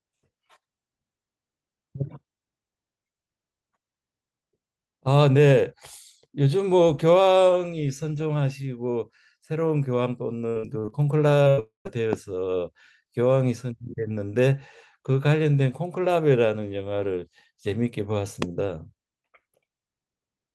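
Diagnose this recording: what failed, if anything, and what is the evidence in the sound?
Repeated packet loss (robotic sound), 10.49 to 10.93 s, is a network fault. Five gaps, the longest 61 ms, were patched by concealment, covering 41% of the stretch and leaving choppy sound with pieces missing.

Short concealed packet loss at 11.43 to 11.48 s and 11.87 to 11.90 s is also on the network side. About 20 ms went missing each time, and the decoder extrapolated the last sound, leaving a brief smear.

A burst of packet loss at 11.50 to 11.60 s removed about 80 ms in a row. The receiver held the last sound and faded it, so a buzz or hiss replaces the missing audio.

A long network dropout is the likely cause at 11.60 to 11.87 s. About 260 ms is lost, with concealment fading into roughly 140 ms of silence before audio resumes further on.

A loud pop sits at 12.13 to 12.15 s and again at 18.42 to 18.44 s. 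Each is a single pulse about 15 dB above the sound, likely an electrical transient in the analogue wiring.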